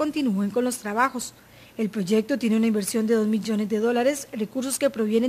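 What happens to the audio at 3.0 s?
At 3.0 s the audio carries the same crude rate conversion present across the whole clip. Samples have been repeated or dropped to the nearest position instead of being properly filtered, which fits a conversion from 44.1 kHz to 48 kHz. The resulting periodic error sits roughly 25 dB below the signal and produces inharmonic tones, heard as a gritty fizz that tracks the louder and brighter parts of the sound.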